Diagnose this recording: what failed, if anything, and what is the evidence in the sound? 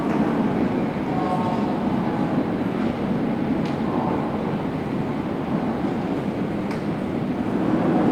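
Nothing failed in this recording of everyday sounds, and the sound gives no evidence of any fault.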